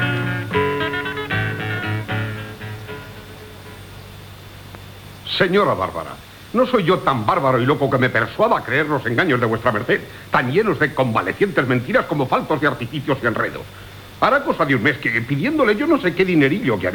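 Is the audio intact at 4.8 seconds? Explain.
No, a loud pop sits between 4.75 and 4.77 s, just before the 4.8-second mark. It is a single sharp pop about 20 ms long, peaking a few decibels above the surrounding level, with the sound continuing underneath. Its likely cause is a sudden voltage step or pulse, such as from a plug, a switch, static or a driver glitch, added to the signal and shaped by the circuitry after it into a brief transient.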